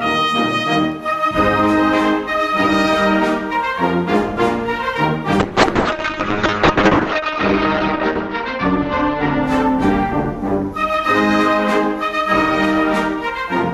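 At 5.4 s a call bitrate drop sets in and lasts until about 11.73 s. The connection's bandwidth estimate fell, so the encoder had far fewer bits to work with. It coded the sound more coarsely and trimmed the top end. The upper limit falls from about 20 kHz to 8 kHz. The audio turns rough, watery and muffled. The worst stretch lasts about 1.5 s, which fits a rate near 6 kbps. Full clarity returns by 11.73 s.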